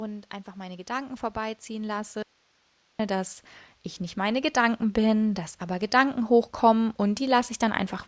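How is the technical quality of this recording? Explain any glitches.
The recording has two kinds of glitch: level swells from automatic gain rising, and one short cut to hiss.

Automatic gain rising happens twice. From 0.54 to 3.41 s, just before "ich nicht", the level climbs by about 11 dB. From 4.14 to 6.26 s, just after "ich nicht", it climbs by about 5 dB. The gain control judged the input too quiet and turned itself up slowly. Voice and background swell together.

An audio dropout to a faint residue runs from 2.23 to 2.99 s, about 0.77 s. The speech stops abruptly and only hiss remains, roughly 40 dB below the voice. It is not a pause or a fade. The cause is likely a lost signal while the path after the break stayed live.

The call's microphone processing leaves nothing above 8 kHz.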